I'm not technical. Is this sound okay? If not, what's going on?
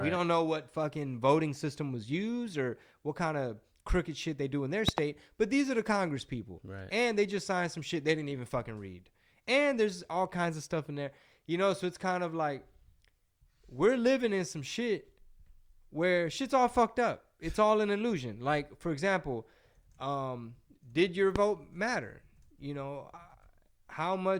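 No. There are two loud pops on top of the speech, which carries on underneath. At 4.89 to 5.00 s, right after "they do in their", comes a quick double pop. At 21.36 to 21.38 s, between "example um did your" and "matter you know uh", there is a single pop. Both stand well above the speech. The likely cause is a sudden electrical jolt, from a plug, a switch, static or a driver glitch, getting into the signal.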